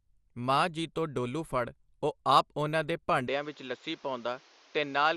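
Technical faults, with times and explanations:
Throughout: MP2 compression. A dull, gurgling, granular texture, with upper bands flickering and coarse quantisation, likely from low-rate MPEG Layer II, fitting about 80 kbps. It stays steady, unlike a device change.
3.28–5.17 s: input switched to a poorer device. The sound abruptly narrows to nothing above 7.2 kHz and a faint new noise floor appears, with no gap and no level jump, likely from a change of input device rather than codec damage.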